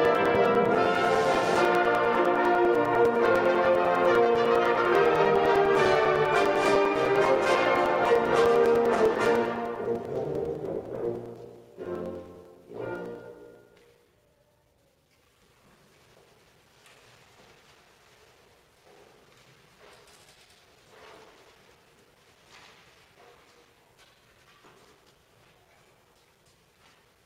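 From 0.05 s to 27.16 s there are periodic USB or driver dropouts. Every 0.1 s, a short stretch of a few milliseconds is lost and replaced by silence, as if a background task were stalling the bus or driver at a fixed interval. The result is a steady tick or pop ten times per second, audible only where there is signal. The strict, unchanging spacing separates it from random clicks or network packet loss.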